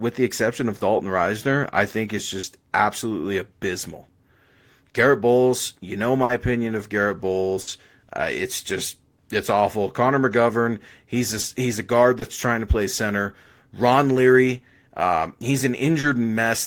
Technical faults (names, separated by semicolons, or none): short concealed packet loss; burst of packet loss